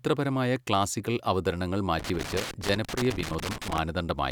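Just after "ക്ലാസിക്കൽ അവതരണങ്ങൾ", from 1.99 to 3.78 s, loose connector crackle sets in. A worn contact keeps breaking the speech, causing irregular scratchy bursts.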